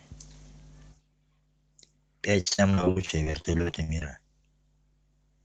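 From 2.40 s to 4.02 s, the speech breaks up with repeated packet loss, giving a robotic sound. Packets keep arriving late or not at all. Each hole is bridged by stretching the last bit of sound, and another hole follows almost at once. There are about two dozen dropouts, the longest lasting 57 ms. Patched sound fills about 37% of that stretch. The result is choppy, with pieces missing. Throughout, the call codec's band stops near 8 kHz.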